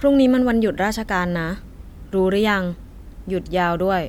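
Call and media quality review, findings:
Nothing stood out on listening to this speech recording.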